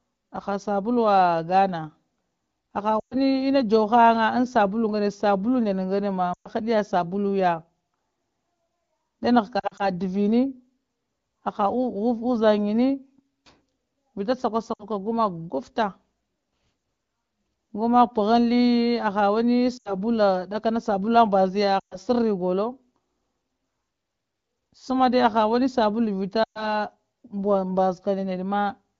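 In this speech clip, lost AMR speech frames forced the wideband decoder to conceal gaps by repeating and fading prior settings, causing brief dropouts to near silence around 3.0 s, 6.33 s, 9.59 to 9.89 s, 14.73 s, 19.77 s, 21.8 s and 26.44 s.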